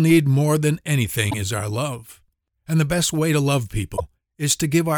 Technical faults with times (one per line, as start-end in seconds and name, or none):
1.27-1.34 damaged data in a compressed stream
3.93-4.00 damaged data in a compressed stream